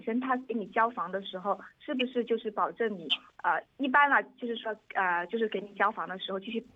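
No technical faults are audible.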